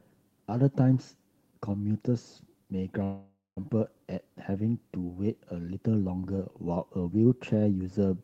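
Packets carrying this speech were likely held up in transit, letting the jitter buffer run dry from 3.03 to 3.59 s: a call audio freeze. The last sound is stretched into a fading buzz, then about 190 ms of silence, before speech resumes where it stopped, delayed by roughly half a second and with nothing lost.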